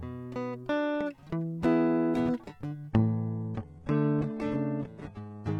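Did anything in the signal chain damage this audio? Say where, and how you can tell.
Yes. The damage happens at the network and codec stage: an adaptive stream at a lower bitrate. At 2.91 s the music switches abruptly, with no gap, and stays degraded to the end. Nothing remains above 11.8 kHz, the treble drops, and artefacts rise. This fits a drop from about 96 kbit/s AAC to roughly 16 kbit/s HE-AAC after the connection slowed.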